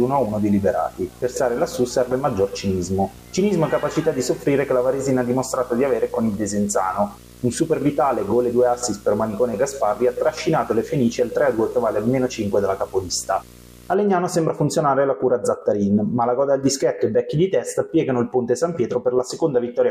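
From the start to 13.94 s there is video or display buzz. A screen or video cable is leaking into the audio path. The buzz sits at 59.94 Hz, the picture's field rate, which points to an NTSC-style signal. Gritty hash rides above it. A thin, very high whine near 15.7 kHz is also present, coming from the line scan. The interference sits roughly 20 dB below the wanted sound. It stops at 13.94 s.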